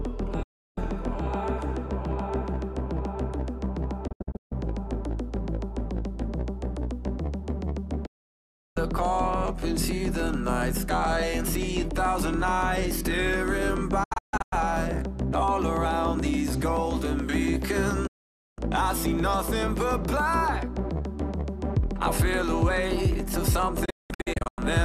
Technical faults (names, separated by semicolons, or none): digital broadcast dropout